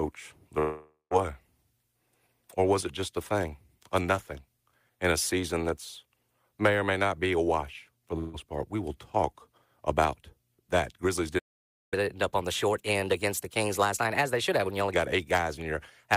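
From 0.59 to 1.14 s, a long network dropout is the likely cause: audio stopped arriving and roughly half a second of speech was lost. The receiver carried the last sound forward for about 512 ms as a fading continuation, which sinks into silence for about the final 150 ms of the gap. When the speech returns, it has jumped ahead by about 520 ms, so that stretch never plays.

Just after "a wash for the", at 8.19 to 8.37 s, a burst of packet loss left about 160 ms of audio missing. The receiver concealed the hole by holding the last sound for about 150 ms and letting it fade, so the speech turns briefly into a held, dimming sound with no silent gap. It then picks up further along, with that fragment dropped.

At 11.38 s the output goes completely silent for about 535 ms, until 11.94 s. This is a playback stall, likely from the player running short of data or its thread being held up, so the sound simply cuts out mid-flow. 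The speech then resumes rather than skipping ahead, leaving the player behind real time.

To recover that lag, the player applies catch-up at higher speed from 11.94 to 14.94 s. It resamples its backlog to run at 1.15 times normal speed, and because resampling shifts pitch along with tempo, the speech sounds hurried and raised by about two semitones for those three seconds. At 14.94 s, speed and pitch drop back to normal.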